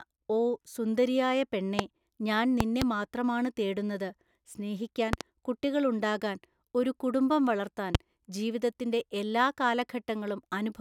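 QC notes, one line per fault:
1.79 s, loud pop: a single sharp pop right after "ഓ സുന്ദരിയായ", peaking roughly 20 dB above the speech. A sudden voltage pulse, likely from a plug, switch or static discharge, lands on the signal while the speech carries on beneath it.
2.60 to 2.84 s, loud pop: two pops in quick succession just before "മാത്രമാണ് തേടുന്നത് സ്നേഹിക്കാൻ കുട്ടികൾ", peaking around 20 dB over the speech, likely as a sudden electrical step is added and the following circuitry shapes it into a brief double thump.
5.13 to 5.23 s, loud pop: a close pair of pops roughly 20 dB above the speech, likely a voltage spike superimposed on the signal and briefly reshaped downstream so it is heard as two hits while the speech continues underneath.
7.95 s, loud pop: one sharp pop between "ഉണ്ടാകാൻ ഒരു കുടുംബം വളർത്താൻ" and "ജീവിതത്തിന്റെ എല്ലാ", about 20 dB above the speech, likely a sudden added pulse that cuts through momentarily without interrupting the speech beneath.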